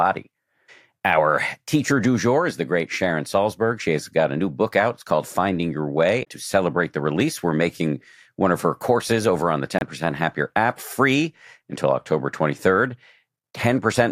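A short glitch breaks into the speech at 6.21 to 6.27 s, just before "to celebrate the release", and a second, briefer blip follows at 9.78 to 9.83 s, right after "courses over on the". Both come from damaged data in a compressed stream: bytes in those stretches are corrupted, so the decoder misreads the affected frames, loses sync and searches for the next valid frame header.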